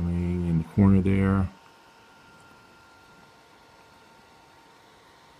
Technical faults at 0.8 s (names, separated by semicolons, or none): none